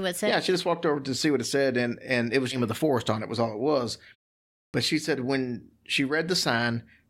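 A speech recording with two distinct playback faults. At 2.51 to 2.57 s, between "and and it was" and "of the forest on", compressed frames are skipped. The audio jumps forward by roughly 300 ms, which fits about fifteen 20 ms frames that were missing or rejected by the decoder as corrupt. The speech then resumes further along. At 4.68 s, right before "she said when", there is a clipped start after a pause. The first 59 ms of sound after a 0.61 s gap is lost, so the onset emerges abruptly from silence without its opening sounds. This is consistent with the output device dropping into a low-power state during the pause and needing time to wake or re-lock before audio passes again.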